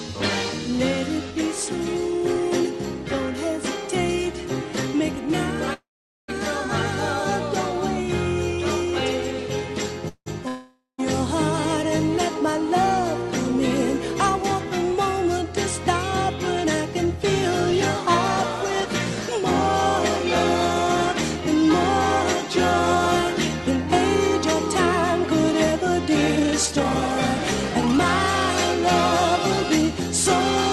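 Packets were most likely held up in transit twice, emptying the jitter buffer and causing a call audio freeze at 5.73 to 6.30 s and again at 10.08 to 10.28 s. Each time the receiver stretches the last sound into a fading buzz or hiss. That fade gives way to silence for about 450 ms in the first gap and only about 60 ms in the second. When the audio resumes it carries on from where it stopped, so the stream is pushed later by about 548 ms and then 179 ms with nothing lost. Just afterwards, from 10.48 to 11.00 s, a long network dropout is the likely cause of a different break. The tail is again continued and fades, with roughly 150 ms of near-silence at the end. This time the sound comes back further along, with about 500 ms of material missing. The accumulated delay is then worked off by a jitter buffer speed-up running from 16.65 to 29.83 s. There the receiver repeatedly cuts out short pitch-period slices, about half a second in total, so the audio plays at 104% speed with unchanged pitch. 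Underneath, the call codec's coding noise and a top end that stops near 12 kHz are audible, which fits Opus at around 40 kbps.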